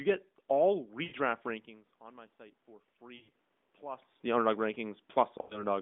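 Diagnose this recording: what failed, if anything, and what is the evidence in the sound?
Speech smears and fades at 1.04 to 1.15 s, 3.16 to 3.31 s and 5.42 to 5.65 s, then returns briefly rough. These are lost AMR speech frames on the radio link. The decoder filled roughly 80 to 100 ms per event by replaying the last good settings at falling gain.

From 1.99 s to 4.27 s, voice and room noise swell together by about 6 dB. This is automatic gain rising in call processing, slowly compensating after the input dropped by about 18 dB when the talker moved away.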